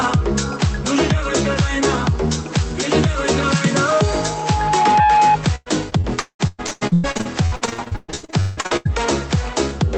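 A loudspeaker feedback squeal starts at 3.92 s and runs to 5.38 s. A single 844 Hz tone swells over roughly a second until it sits about 5 dB above the rest of the audio. The microphone is hearing its own loudspeaker, and at that frequency the loop gain tops one. From 5.55 s to 8.87 s there is repeated packet loss, heard as choppy, robotic sound. Short holes follow one after another. Each is patched by stretching the last bit of sound. About half of this stretch is filled-in material, and the longest hole lasts 196 ms. The audio comes through a call codec path, and its top end stops near 8 kHz.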